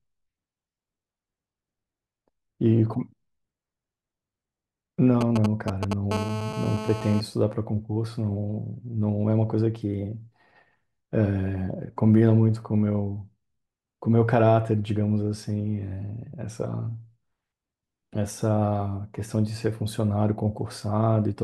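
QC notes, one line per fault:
5.21–5.93 s: GSM signalling bursts. A nearby 2G handset sends short clusters of radio bursts while it signals to the network. The audio wiring rectifies those pulses, so they appear as sound. The result is a galloping dit-dit-dit of brief buzzes pulsing at about 217 Hz, the handset's burst rate. The buzzes sit at roughly the same level as the speech.
6.11–7.20 s: GSM phone buzz. The handset has moved into a call and now transmits continuously at about 217 bursts per second. The circuit rectifies each burst, giving a hard, raspy buzz at 217 Hz. Its sharp edges produce many harmonics. The buzz is nearly steady at about 8 dB below the speech and has no relation to what is being said.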